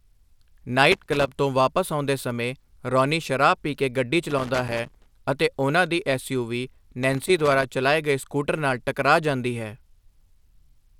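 Loose connector crackle breaks into the speech three times. The first runs from 0.92 to 1.28 s, just before "ਤੋਂ ਵਾਪਸ ਆਉਂਦੇ ਸਮੇਂ". The second, the longest, lasts from 4.30 to 5.06 s, between "ਸ਼ਰਾਬ ਪੀ ਕੇ ਗੱਡੀ" and "ਅਤੇ ਉਹਨਾਂ ਦੀ". The third spans 7.03 to 7.64 s, ahead of "ਚਲਾਏ ਗਏ ਸਕੂਟਰ ਨਾਲ". A worn or dirty contact keeps making and breaking. This chops the signal into a ragged, irregular scratching.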